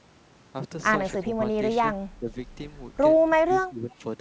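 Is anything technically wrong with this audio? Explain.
Yes. Two faults are audible in this speech clip.

Speech suppressed in double talk occurs at 1.23 to 1.43 s, 2.19 to 2.29 s and 3.36 to 3.95 s. The level dips by about 10 dB, for roughly a tenth of a second in the first two spots and close to half a second in the last. This is likely the echo canceller treating simultaneous far-end speech as echo and attenuating the near-end talker along with it, so the voice sags and thins in those stretches.

An echo leak appears at 3.91 to 3.95 s as a brief, very faint delayed copy of the voice, about 35 dB below the direct speech and trailing it by 335 ms. Residual loudspeaker pickup that the canceller failed to remove is the cause, sent back down the line. The leak overlaps the tail of the last suppression, which fits a canceller struggling during double talk. The band-limited character, with nothing above 8 kHz, matches a wideband call codec.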